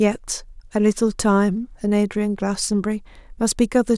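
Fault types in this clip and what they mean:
Nothing here calls for a fault line, since no faults turn up anywhere in the recording.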